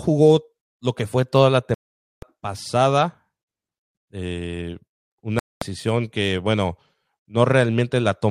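Digital broadcast dropout hits this speech clip twice: the sound mutes from 1.74 to 2.23 s, right after "que fue toda la", and again from 5.39 to 5.62 s, just before "que bueno". Each time the receiver lost frames it could not decode and fell silent until clean frames returned, so about 480 ms and then 224 ms of programme are simply gone.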